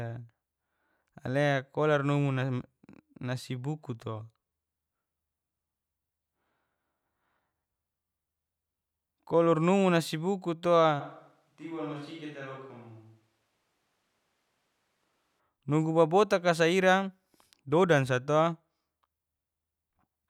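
From 11.02 to 15.39 s the speech turns suddenly hollow and roomy and about 10 dB quieter, starting just before "nugu babotaka", likely a switch to a distant microphone.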